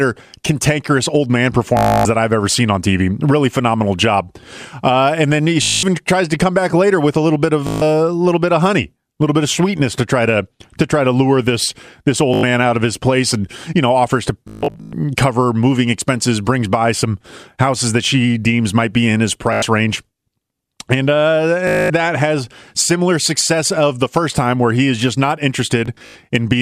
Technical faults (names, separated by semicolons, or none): Bluetooth stutter